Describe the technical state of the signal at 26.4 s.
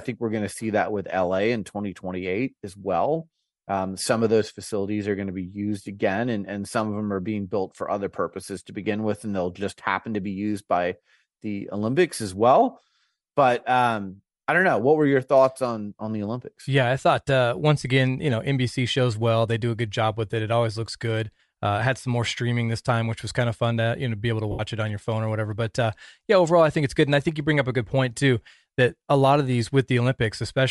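Bluetooth LC3 compression is audible at 26.4 s, as it is across the whole speech clip. The likely cause is a transform codec working in short frames, consistent with 7.5 ms at roughly 48 kbps, filling the discarded upper spectrum with noise and leaving a plainly audible breathy, grainy edge.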